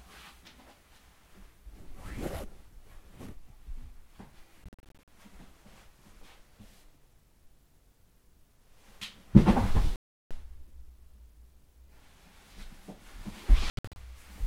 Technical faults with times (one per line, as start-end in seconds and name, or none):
4.64-5.08 Bluetooth dropout
9.96-10.31 Bluetooth dropout
13.70-13.96 Bluetooth dropout